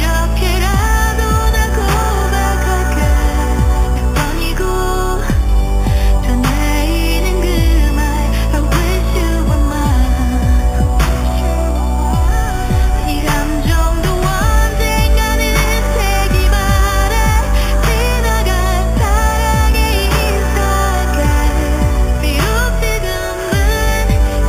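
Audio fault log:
Throughout: imaging from sample-and-hold upsampling. The rate was raised by holding each sample with no smoothing filter. Mirrored copies of the spectrum are left above the original band. The lowest copy sits between 4 kHz and 8 kHz, about 18 dB below the main sound. It is heard as a bright metallic fizz that rises and falls with the level. The pattern fits a step from 8 kHz up to 44.1 kHz.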